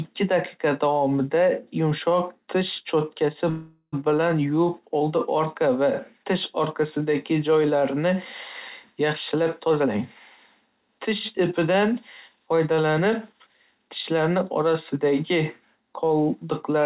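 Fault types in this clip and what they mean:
Call audio freeze: Around 3.5 to 3.95 s the sound stalls, likely because packets got held up and the buffer ran dry. The last bit is stretched into a fading buzz or hiss with a short silence, about 50 ms, then carries on where it left off, about 425 ms late.
Jitter buffer speed-up: The receiver trims tiny pitch-period slices to shed the backlog, so the speech speeds up at the same pitch. It's obvious from 9.34 to 9.98 s at 129% speed, then a milder 106% from 11.37 to 14.61 s, each cutting roughly 200 ms.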